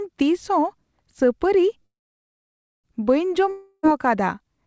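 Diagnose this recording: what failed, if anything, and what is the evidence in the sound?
A call audio freeze at 1.86 to 2.86 s: the last sound briefly continues, then about 0.92 s of silence. Likely cause is a jitter buffer running empty on the network path. The speech resumes intact, just delayed.

A long network dropout at 3.50 to 3.85 s: a fading fill replaces 0.34 s of speech that likely never arrives. Playback resumes later in the utterance, with that portion permanently lost.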